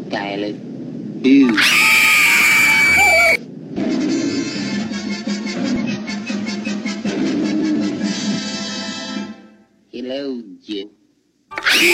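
Damaged data in a compressed stream breaks the sound three times: at 3.72 to 3.77 s, 5.76 to 5.82 s and 10.78 to 10.84 s, each lasting about 50 to 60 ms. In each spot, bytes of the encoded stream were corrupted, so the decoder misread or rejected the affected frames, lost sync and hunted for the next valid frame header. Each event is heard as a brief chirp, squawk, click or short hole cutting across the sound.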